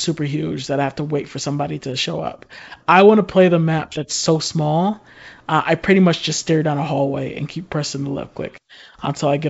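Nothing stood out on listening to this speech, which comes across with the clear, wideband character of G.722 wideband telephone coding.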